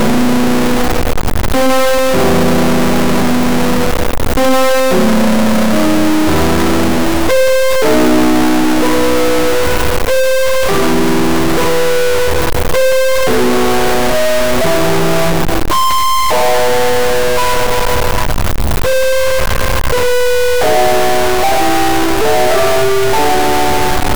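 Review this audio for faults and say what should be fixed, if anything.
Harsh, buzzy distortion runs through the entire music clip, and quiet passages fill with loud noise. This is likely a stuck bit. A high-order bit is held fixed, so about half the samples jump by a step of about -5 dBFS. The waveform shows abrupt offset steps, and a spectrogram shows broadband smearing even in the gaps.

Test the converter and its data lines for a broken or shorted connection before re-recording.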